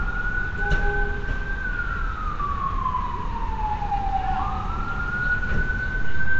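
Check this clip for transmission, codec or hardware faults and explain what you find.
One codec fault runs through the whole clip. From start to finish the sound carries a rough, hissy halo and a smeared, underwater quality, and nothing is heard above 7.7 kHz. The likely cause is Nellymoser compression, the Nellymoser Asao codec used for Flash microphone audio, with damage consistent with a rate around 32 kbps. It codes short blocks with a fixed bit budget, so weak bands get no bits and are filled with noise. That substitution produces the hiss.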